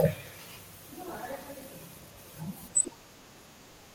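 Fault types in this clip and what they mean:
DAB burbling: weak-reception bit errors slip past error correction, so wrong samples put short blips of noise into single sub-bands over the speech in two stretches.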